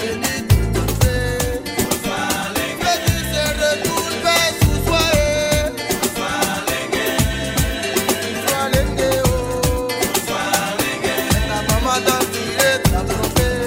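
Nothing in this audio stood out as a technical problem on listening.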